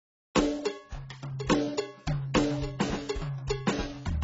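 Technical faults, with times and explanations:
Throughout, AAC compression: nothing gets through above 7.6 kHz, so this music sounds dull, and sustained tones have that warbly, fizzy smear of heavy codec damage. What's likely going on is an AAC-LC encode at a very low rate, which fits something around 16 kbps. At that budget the encoder drops the top band entirely and quantises what's left so coarsely that the spectrum shimmers.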